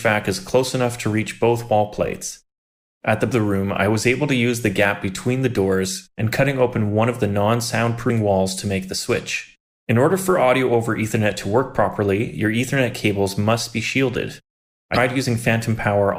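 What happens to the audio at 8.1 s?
A short glitch cuts through the sound from 8.06 to 8.10 s. It comes from damaged data in a compressed stream: corrupted bytes there make the decoder misread its frames and lose sync until it locks onto the next valid frame header.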